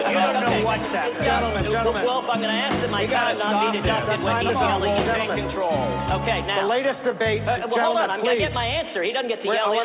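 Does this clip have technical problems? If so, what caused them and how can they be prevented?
No, there are no technical problems in this clip.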